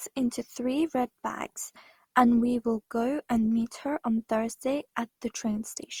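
Throughout, the speech sounds swirly, smeared and hollow, with blurred attacks. Likely generation loss: about five lossy passes, each adding damage, fitting Opus near 48 kbit/s.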